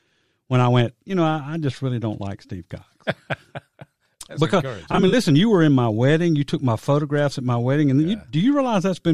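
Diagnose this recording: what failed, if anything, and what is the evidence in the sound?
The codec stage failed: AAC frame loss with concealment between 4.91 and 5.14 s, just before "you were in my". About 107 ms of missing audio, scattered in short runs, comes back as smeared, phasey fill rather than silent gaps or clicks, because the decoder reuses the last good spectrum.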